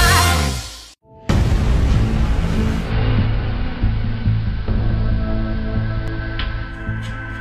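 The audio drops from a digital radio broadcast to the station's AM analogue signal at 2.75 s and returns at 6.81 s. This is digital radio blending to analogue. The receiver lost the digital stream and cross-faded to the analogue version of the same station. Each cross-fade takes about 194 ms. Hiss comes up, sitting well below the signal, around 25 dB down. The level shifts by about 1 dB. At 6.08 s there is a block of digital silence. The sound cuts out for 2.18 ms, with no fade in or out. The abrupt edges produce a short tick. This points to the program not filling the output buffer in time, leaving a block of zeros in its place.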